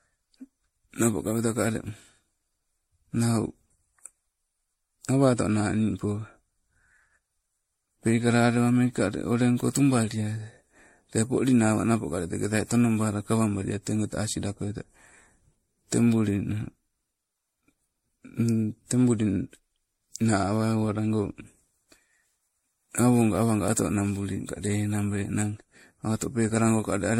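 Generation loss runs through the whole speech clip. It sounds swirly, smeared and hollow, and attacks blur. Nothing sits above 16.5 kHz. The likely cause is roughly seven passes through an MP3 encoder, which fits a 64 kbit/s chain, each pass stacking fresh quantisation damage.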